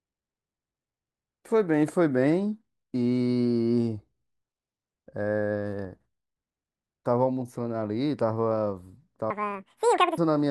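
From 9.30 s to 10.18 s the speech is read two samples at a time, giving double speed. The reader treats each pair of samples as one frame, so playback runs twice as fast and an octave higher, with a chipmunk-like sound.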